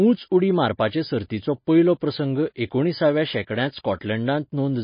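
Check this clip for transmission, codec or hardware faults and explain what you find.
One codec fault runs through the whole clip: MP3 compression, likely from a low-bitrate encode. Nothing is present above about 5.1 kHz, so the speech sounds dull. That hard ceiling fits a bitrate around 24 kbps. Starved of bits, the encoder discarded the treble outright and zeroed weaker frequency lines. Those lines flicker on and off between frames. The damage is plainly audible as a watery, swirling texture, with smeared consonant attacks.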